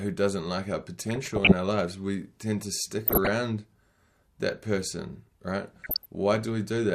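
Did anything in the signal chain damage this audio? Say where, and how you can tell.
Yes, DAB burbling at the codec stage: 1.02–1.52 s after "doesn't like our", 2.98–3.29 s after "lives we tend to", and 5.82–6.15 s after "that person right". Uncorrected bit errors corrupt MP2 scale factors, making single sub-bands jump in level for up to a frame. Spectrograms show scattered rectangular band blocks flaring.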